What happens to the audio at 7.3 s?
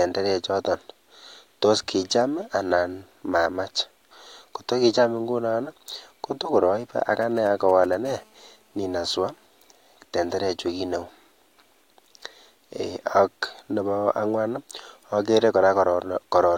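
GSM signalling bursts run from 7.22 to 7.95 s. A nearby 2G phone's radio bursts get rectified, giving a galloping dit-dit-dit of short 217 Hz buzzes well below the speech.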